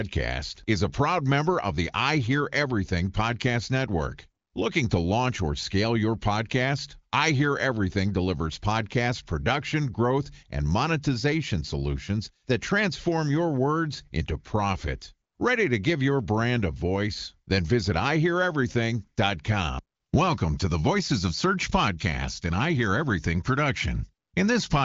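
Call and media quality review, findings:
No faults found; HD Voice wideband path sounds as expected.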